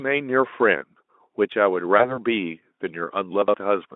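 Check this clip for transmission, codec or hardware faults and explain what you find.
Two transmission faults are audible in this speech, carried over a telephone-band Speex link (roughly 250 Hz to 3.6 kHz) whose coding itself adds little or no audible damage.

VoIP packet loss concealed by the speech codec, 1.97 to 2.19 s: the loss points to a single 20 ms frame. The decoder fills the gap by repeating its last pitch and vocal-tract shape at falling gain, so the speech is briefly stretched into a fading buzzy or noisy sound. Because each decoded frame depends on the previous one, the weakness persists for about 200 ms before the speech is fully restored. On a spectrogram the harmonics flatten into a steady, smeared stack that fades. The waveform shows an envelope dip that recovers gradually rather than a clean gap.

Chunks out of order, 3.42 to 3.54 s: a 60 ms block of audio plays one chunk late, after the block that should have followed it. 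No audio is lost, but the sequence is scrambled, giving a short jumbled stutter with three hard joins. The waveform shows three abrupt discontinuities. On the spectrogram these appear as thin vertical broadband lines, with formant tracks that jump instead of flowing smoothly.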